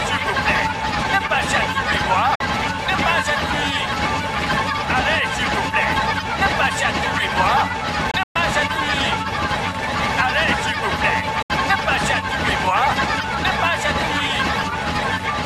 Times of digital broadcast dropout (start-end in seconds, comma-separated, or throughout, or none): 2.35-2.41, 8.11-8.36, 11.42-11.50